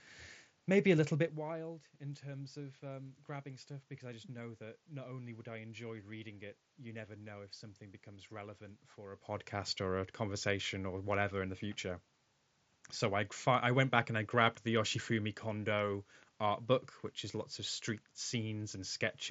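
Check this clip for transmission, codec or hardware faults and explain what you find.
Nothing here points to a transmission, codec or hardware problem; the background room noise and the level shifts around 1 s and 9 s, where the talker moves relative to the microphone, are simply part of how the recording was made.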